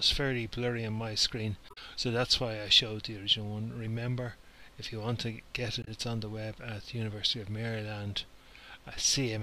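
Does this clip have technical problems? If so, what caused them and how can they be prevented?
Yes. Damaged data in a compressed stream causes two short glitches, from 1.66 to 1.78 s and from 5.81 to 5.88 s. Corrupted bytes made the decoder misread frames and hunt for the next valid header. Prevent it with checksummed, reliable transfer and storage.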